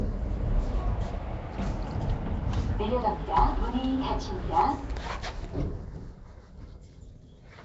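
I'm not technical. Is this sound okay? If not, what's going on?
No. From start to finish the sound has a rough, hissy haze and a smeared, underwater quality, with nothing above 7.7 kHz. The likely cause is Nellymoser compression, the old Flash microphone codec, which fills weak frequency bands with noise instead of real detail.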